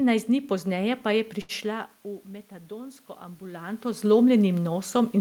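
Speech, with two technical faults. At 1.41 to 1.51 s, just after "dni pozneje pa je", there is a short stall from a late packet. The jitter buffer ran dry, so the receiver held the last sound for about 75 ms until the packet arrived, then resumed from the same point. That leaves a brief drawn-out hold with a slight buzz or dip. Unlike a lost packet, nothing is skipped, but playback now runs about 75 ms later. From 2.68 to 4.12 s, the automatic gain rises: after the input level fell by about 15 dB, the control lifted its gain by about 5 dB over roughly a second and a half. A talker moving relative to the microphone, as happens around 1.5 s and 3.5 s, changes only the voice level. This gain rise instead lifts the room noise along with the voice, so the background swells at the same time.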